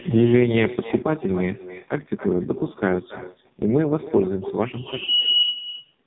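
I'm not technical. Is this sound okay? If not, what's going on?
No. Throughout the recording, the speech is shadowed by a fainter, thinner copy of itself arriving about a third of a second later. This is echo with no canceller: the far end played the call through a loudspeaker, its microphone caught it, and nothing removed that copy before it came back.

The voice also sounds muffled, buzzy and artificial from start to finish, with nothing above 3.8 kHz. That is the AMR narrowband mobile codec, the older phone-network speech format, squeezed hard enough to suggest one of its lowest-quality settings.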